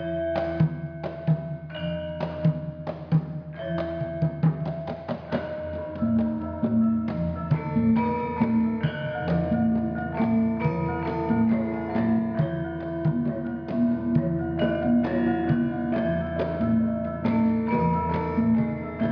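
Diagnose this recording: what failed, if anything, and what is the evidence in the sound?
Nothing failed: no stage of the chain, from analogue wiring through conversion, buffering, processing and playback, leaves any audible evidence of a fault in this recording.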